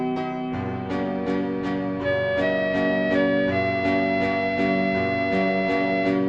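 Music, with no technical faults heard anywhere in it.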